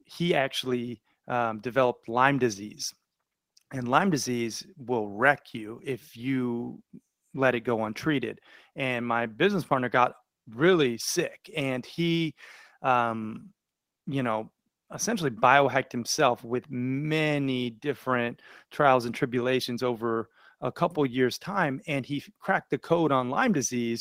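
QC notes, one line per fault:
No technical faults are detected in the speech signal.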